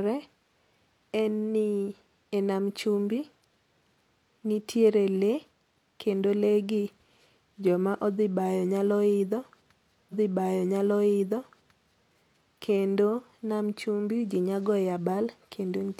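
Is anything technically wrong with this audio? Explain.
Yes. From 10.08 to 12.08 s there is a stream segment repeated: the player queued or fetched the same chunk of the stream twice, so about 2.0 s of speech plays again, with a small blip at the jump back, and the repeat ends just before "kendo nam chumbi ji". What sets it apart from a buffer stutter is the length. A whole two-second stretch recurs intact, not a few milliseconds looping, and it lengthens the clip rather than overlapping like an echo.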